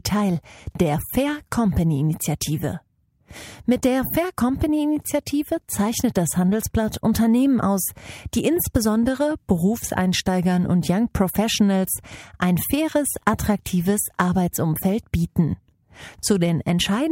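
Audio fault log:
No audible faults found anywhere in this speech recording.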